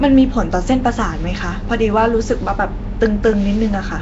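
Throughout, the speech has a hissy, underwater smear and nothing above 7.8 kHz, likely Nellymoser compression noise-filling starved bands, unlike the swirly gaps of MP3.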